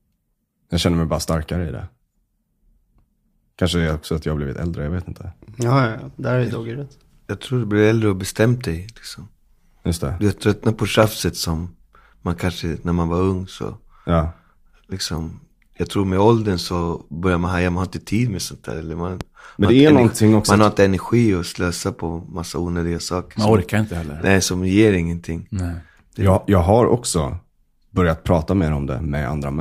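At 11.03 to 11.05 s, between "tröttnar på" and "som man kanske när", a loud pop cuts into the speech, and a second loud pop follows at 19.21 to 19.23 s. Each is a single pulse standing roughly 10 dB above the speech. The likely cause is a voltage step from a plug, switch, static or driver glitch entering the signal path. Unlike a dropout, the speech continues uninterrupted underneath each pop.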